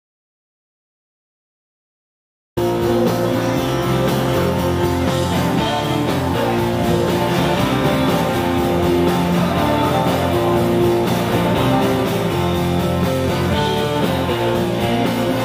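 The clip opens in complete silence, with no room tone at all, until the sound cuts in abruptly at about 2.57 s. This audio dropout to silence is likely a lost input, such as a disconnected device, a failed link or a stray mute, while the recorder kept writing silence.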